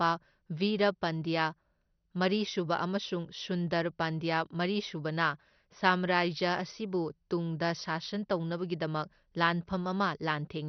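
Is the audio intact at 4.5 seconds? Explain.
No. The speech there has the dull, gurgling, granular sound of heavy MP2 compression, likely at a low bitrate, running throughout. Nothing remains above 6.1 kHz, and the upper sub-bands flicker, unlike a plain low-pass filter.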